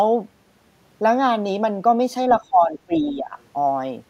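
An echo canceller that likely failed to remove all of the loudspeaker signal from the microphone lets the other side's voice leak through from 2.31 to 2.35 s: a brief scrap of a second voice, roughly 20 dB below the main speech, flickers in under it.

Speech is then suppressed in double talk from 2.39 to 3.36 s, where the canceller likely mistook the talker for echo while both sides spoke and pulled everything down. The voice dips unevenly, at worst by about 15 dB, across around 0.7 s in total.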